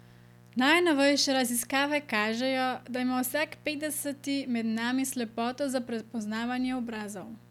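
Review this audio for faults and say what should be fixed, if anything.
A mains buzz runs under the speech for the whole clip, sitting roughly 25 dB below it. Sharp switching spikes at twice the 60 Hz supply rate spread harmonics into the kilohertz range, giving a steady, raspy edge. Prevent it with shielded, properly grounded cabling routed away from dimmers and rectifiers.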